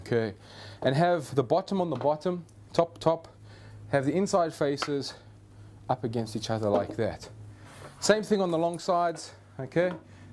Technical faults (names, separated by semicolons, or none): none